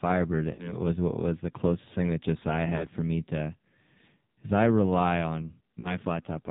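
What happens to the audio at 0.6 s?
Around 0.54 to 0.72 s, about 40 ms of speech frames were lost, which fits two 20 ms frames, so the decoder stretched the last pitch and vocal-tract settings with falling gain. The sound smears, fades, and comes back weak or rough. Throughout this moment the AMR narrowband mobile codec, at a low 5.9 kbps, cuts everything above 4 kHz and leaves the voice heavily buzzy and synthetic.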